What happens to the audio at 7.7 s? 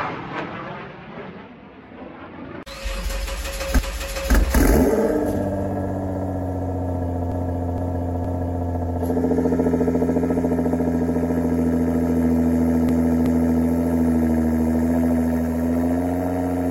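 Repeated frames: from 7.32 to 8.71 s, a 0.46 s block of compressed frames plays three extra times, stuttering and adding 1.39 s; spectrograms show identical tiled patterns.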